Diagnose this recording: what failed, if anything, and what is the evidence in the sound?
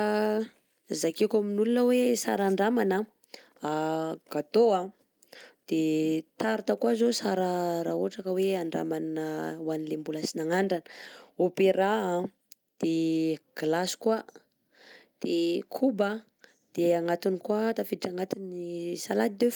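Nothing in this speech recording points to a failure at any stage of the chain, so there's no fault to diagnose here.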